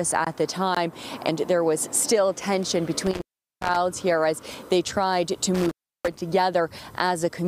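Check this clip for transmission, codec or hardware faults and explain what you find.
Two dropouts from an intermittent contact break up the clip. From 3.07 to 3.76 s and again from 5.55 to 6.22 s, the sound crackles, cuts out to faint hiss for 399 ms and 334 ms, then crackles back as a loose cable or plug briefly opens.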